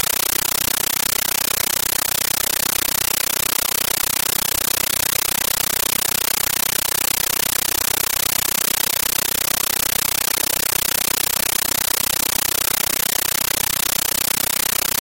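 From start to end, a compressed stream played as audio replaces the sound: AC-3 data read as ordinary samples instead of being decoded. Very loud 13.3 ms static bursts, separated by silent padding, repeat 31.25 times a second, a rhythmic chatter that steady hiss never has.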